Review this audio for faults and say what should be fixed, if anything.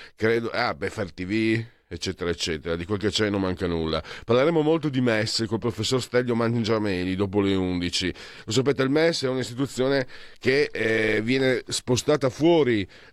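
Nothing in this speech recording stands out as a technical fault. No fix is needed.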